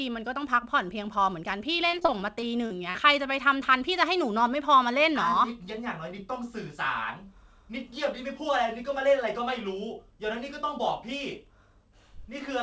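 From 1.76 to 2.96 s the speech breaks up with repeated packet loss, giving a robotic sound. Eight short holes, the longest 42 ms, total about 200 ms, and the receiver covers 183 ms of that by stretching the last stretch of sound forward, so roughly 15% of the span is synthetic. Unlike a single dropout, the gaps come in quick succession, producing a choppy, robotic stutter. Throughout, nothing sounds above 8 kHz, which fits a wideband call codec.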